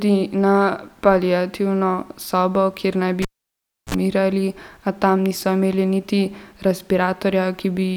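At 3.22 s someone yanks a live cable and shoves it back in, a classic cable pulled and plugged in. There's a pop as the connection breaks, then about 0.67 s of near silence while nothing's attached. As the plug goes back in, the tip touches first and you get a short burst of 60 Hz mains buzz, roughly 51 ms, before the full connection lands with a second pop and the speech returns by 3.95 s.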